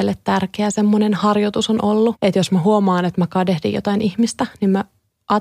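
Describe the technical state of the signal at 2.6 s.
At 2.6 s the speech runs about 6% slow and sits roughly a semitone flat, from 2.42 to 3.10 s, then snaps back: likely a drift correction step, with clock-matching software briefly cutting the playback rate.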